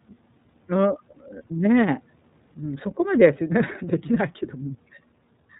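The clip is speech, and it carries iLBC codec coloration from start to finish. Nothing above 4 kHz survives, so the sound is dull and telephone-like. Each short block is coded on its own, without reference to the one before. That gives a slightly rough, synthetic grain that is plainly audible throughout. The blocking is consistent with 30 ms frames. The level of detail fits the 13.33 kbps mode of this narrowband VoIP codec.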